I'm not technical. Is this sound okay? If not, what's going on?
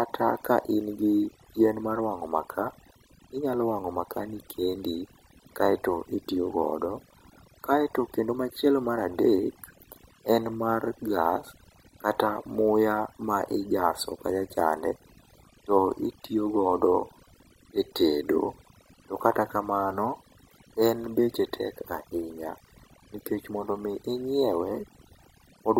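No, it isn't quite right. The speech has overdone noise removal from start to finish. A cleanup tool was set too strong, so it wiped out the background noise and quiet parts of the voice. The background drops and breaks up into twinkling specks.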